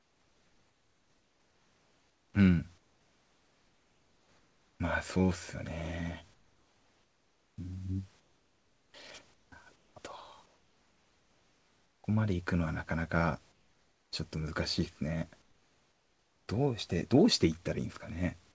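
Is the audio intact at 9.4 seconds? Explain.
No. From 9.34 to 9.96 s the sender likely stopped transmitting during a pause, as its voice detector judged there was no speech, and the receiver filled the gap with comfort noise in place of the background. The real room noise, sitting about 38 dB below the speech, gives way to a steady, featureless hiss for roughly 0.38 s, losing its detail until the sound resumes, which fits standard RTP comfort-noise handling.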